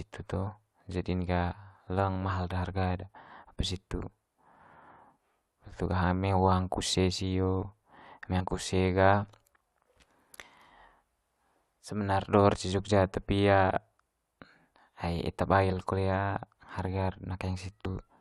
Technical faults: compressed frames skipped

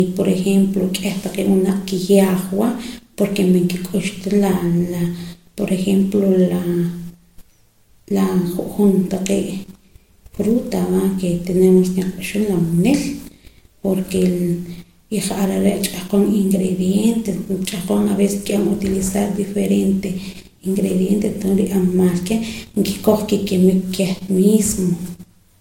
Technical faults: transcoding between lossy codecs

